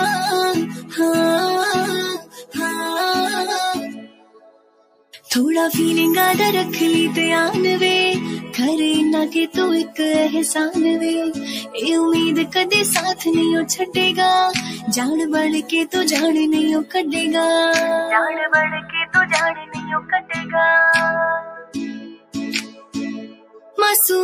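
All the way through, there's a noise suppressor applied to music or sounds. It's a speech-tuned suppressor left running on material it doesn't understand. It keeps mistaking sustained, steady parts for background noise and pulling them down, so the level swings by something like 10 dB. Attacks punch through fine, but anything held or decaying sinks right after, which gives the whole thing a pumping, fluttery, thinned-out feel.

On top of that there are eight spots of sound cut by the noise suppressor, where it clamps down harder than usual. The first is at 0.77 to 0.96 s, dipping about 9 dB. Next comes 2.18 to 2.57 s at about 16 dB, then 3.92 to 5.29 s at about 18 dB. After that it's 9.48 to 9.99 s at about 12 dB and 11.39 to 11.75 s at about 9 dB. Then 15.62 to 15.95 s drops about 13 dB, 19.54 to 20.54 s about 16 dB, and 21.42 to 23.78 s about 18 dB. The longer ones at around 4 s and 22 s are the worst. 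Tails just get swallowed there, and sustained sound collapses instead of ringing out.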